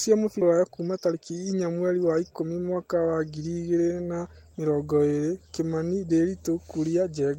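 Speech, with a skip ahead at 0.41 to 0.43 s. Roughly 0.7 s of audio is missing, and the two sides are butted together with no filler, so the delay drops by about the same amount. On the waveform this shows as an abrupt change of envelope with no silent gap. On a spectrogram, harmonic tracks break off and restart at unrelated frequencies in a single column, often with a faint vertical click line. It most likely happened because the buffer had to discard queued audio after it overflowed. Right after it, from 0.51 to 2.49 s, comes a jitter buffer speed-up ending just before "mwaka wa ngiri". The receiver repeatedly cut out pieces one or a few pitch periods long to drain its excess delay, removing about a fifth of a second in total. Delivery runs at about 111% speed while the pitch stays the same, which gives a hurried feel. On a spectrogram the harmonic spacing stays constant while syllables and pauses look compressed in time. 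On the waveform, the periodic cycles show tiny splice points where whole periods vanish.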